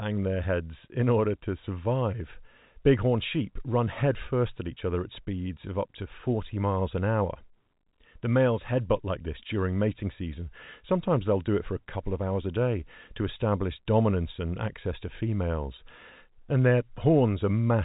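No technical faults can be heard in this speech.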